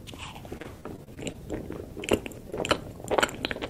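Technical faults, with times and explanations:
0.57–1.36 s, repeated packet loss (robotic sound): seven short gaps, up to 37 ms, are patched by repeating prior sound, giving choppy sound with pieces missing; spectrogram shows smeared, repeated frame stripes.
2.50–2.54 s, short stall from a late packet: the jitter buffer ran dry, so sound is held about 22 ms with nothing lost; waveform shows a brief repeated-cycle plateau.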